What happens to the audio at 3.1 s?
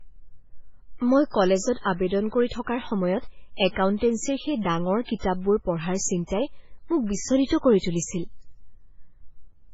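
At 3.1 s the speech is dull, with nothing above 7.7 kHz. This lasts the whole clip. It's likely low-bitrate audio saved at a high bitrate, so the original losses remain.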